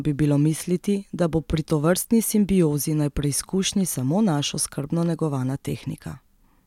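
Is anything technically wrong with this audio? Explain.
No, nothing technically wrong can be heard in this speech recording; the signal stays continuous and steady throughout.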